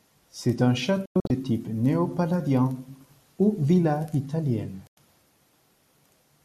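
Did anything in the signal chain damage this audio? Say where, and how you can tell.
Yes. A digital broadcast dropout struck at reception. From 1.06 to 1.30 s the speech breaks into short holes totalling 168 ms, the longest 96 ms. Just after "ou villa italienne", at 4.87 s, it mutes for 96 ms. Each cut fades in 3 ms. The receiver muted lost or corrupted frames.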